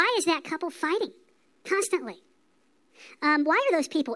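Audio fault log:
Throughout: wrong sample rate. The speech runs 1.5 times too fast and sits about seven semitones high, so it comes across as high and hurried. Speed and pitch shift together by the same ratio, which fits 16 kHz audio played back at 24 kHz without conversion.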